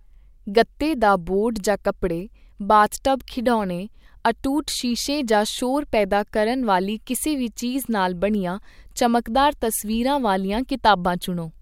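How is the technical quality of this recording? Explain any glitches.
Nothing in the recording stood out as a technical problem on listening, so there are no glitches to explain.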